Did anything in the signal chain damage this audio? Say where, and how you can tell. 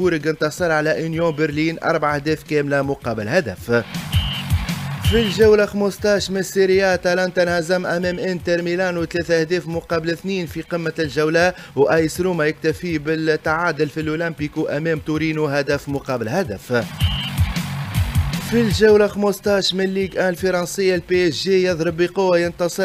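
Yes. Between 15.75 and 16.56 s a block size mismatch (padded) at the driver or buffer stage adds a steady 43.1 Hz buzz. This fits 1024-sample reads at 44.1 kHz, with a zero-filled gap closing each block. The pitch holds, and the slowdown is negligible (0.999×). That regularity separates it from random underrun dropouts.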